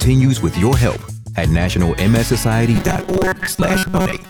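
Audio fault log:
2.76–4.29 s: robotic sound from repeated short buffers, a rigid 188 Hz metallic buzz, likely from one 5.3 ms block repeated in place of about half the audio.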